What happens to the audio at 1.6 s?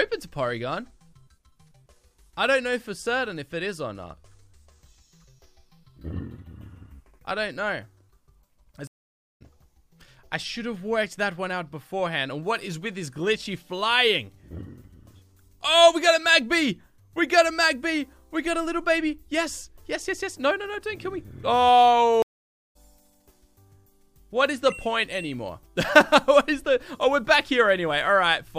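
Nothing goes wrong at 1.6 s; the audio plays through that moment intact, with no dropout, click or distortion.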